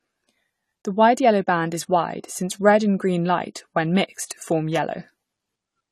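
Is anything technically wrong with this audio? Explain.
Yes, there are two problems. Throughout the speech the top end is missing, with nothing above 13.9 kHz. The damage is plainly audible: dull, smeared sibilants with a fizzy, warbling texture. This is likely AAC compression, consistent with AAC-LC at roughly 32 kbps. On a spectrogram the energy stops at a hard ceiling.

Pre-echo occurs from 4.25 to 4.30 s. The transform codec spread quantisation noise across its block, so noise sized for a sharp attack leaks into the quiet before it. It sounds like a 45 ms hiss ahead of a softened onset. The waveform shows a low noise smear just before the transient.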